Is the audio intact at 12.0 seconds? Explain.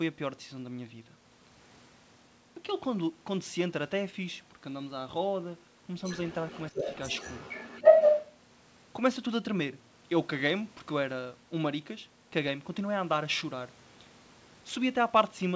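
Yes, the audio is intact at 12.0 seconds, with no dropout, glitch or other fault at that moment.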